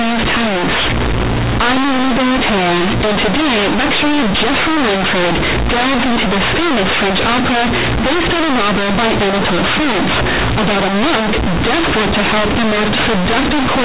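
The speech is harshly buzzy and distorted from start to finish, with quiet syllables blaring as loud as stressed ones and heavy noise filling every pause, all above narrow telephone-band sound that stops below 4 kHz. This is companded audio read as linear: A-law bytes are being played as plain 8-bit samples with no expansion, so every sign change throws the waveform across half its range.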